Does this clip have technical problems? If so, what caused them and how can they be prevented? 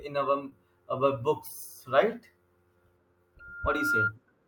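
Yes. At about 0.49 to 0.53 s there is short concealed packet loss: roughly 20 ms of the speech stream did not arrive at the decoder in time. The receiver covered about 18 ms of the gap by extending the preceding sound, then crossfaded back into the real signal. The result is a brief smear in the speech rather than a hard dropout. A larger jitter buffer, in-band forward error correction, or a less congested network path would prevent it.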